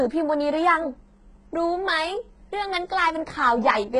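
Speech with gritty, metallic sibilants and a synthetic-bright treble that stops near 11 kHz throughout, likely HE-AAC compression at around 12 kbps, whose replicated highs, unlike a plain low-pass, stay present but mismatched.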